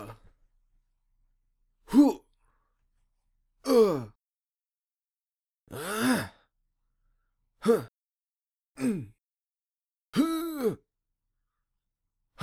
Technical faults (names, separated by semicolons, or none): none